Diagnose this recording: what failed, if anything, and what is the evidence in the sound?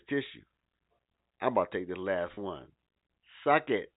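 At 2.34 to 2.37 s, just after "to take the last", a network packet loss with pitch repetition fills 30 ms, consistent with one lost packet, by repeating the last pitch period. This gives a brief held, buzzy tone. A buffer underrun would leave a silent gap or click instead.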